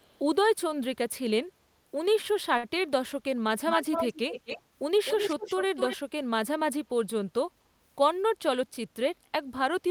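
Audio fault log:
0.0–0.2 s, echo leak: A very faint copy of the speech trails it by 314 ms, about 35 dB below. It is barely audible. The likely cause is a far-end loudspeaker whose echo canceller let a trace of the pickup back into the call.
3.70–4.62 s and 5.05–5.97 s, echo leak: A strong delayed copy of the speech follows 255 ms behind, only about 5 dB below it. It sounds like a doubled second voice. This is likely the echo canceller at a speakerphone end failing to remove what its microphone heard.
2.57–2.65 s, short stall from a late packet: One sound is held for 59 ms too long, with a slight buzz or dip. A packet arrived late, so the receiver stretched the last sound to fill the gap. Nothing is lost, but playback now runs 59 ms later.
7.93–8.63 s, jitter buffer speed-up: The speech runs at 108% speed with unchanged pitch and sounds hurried. The receiver had too much audio queued. It cut many small pitch-period pieces, about 50 ms in total, to bring the delay back down.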